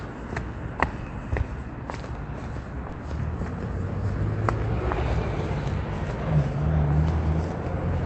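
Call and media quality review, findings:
Short stall from a late packet, 2.89–2.94 s. Jitter buffer underrun, about 30 ms of sound stretched and held with a slight buzz or dip, then continuing 30 ms later. Unlike loss concealment, nothing is dropped. Audio band tops out near 8 kHz.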